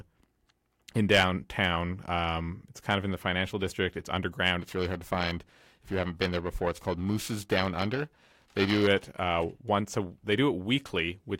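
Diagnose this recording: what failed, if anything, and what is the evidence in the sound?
The converter stage failed with periodic clock jitter from about 4.59 to 8.87 s, starting just before "it uh once a". Interference at around 1 kHz modulates the sampling clock, placing sidebands at that spacing around every component of the speech, strongest on high frequencies, which gives a rough, metallic edge.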